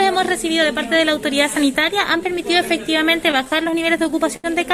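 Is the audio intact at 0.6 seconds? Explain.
Yes, at 0.6 seconds the audio is intact, with no dropout, click, distortion or other fault audible at that moment.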